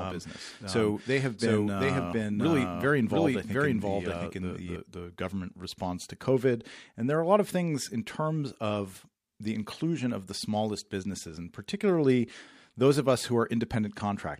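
From the start to 4.76 s, a doubled audio track plays an equally loud copy roughly 0.7 s late, likely from a second capture path, ending abruptly before "the government response to".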